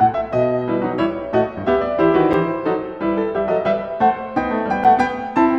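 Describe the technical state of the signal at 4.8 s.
At 4.84 s the music drops out for about 7 ms: a gap between chunks. The audio appears to arrive in 2.5 s blocks, and here silence sits at the join between two of them, so playback resumes exactly where it stopped, with nothing missing, but briefly interrupted. It is heard as a tiny hole or dip in the sound. On a waveform it shows as a flat near-silent notch with abrupt edges, and on a spectrogram as a thin vertical blank stripe bordered by broadband transient lines.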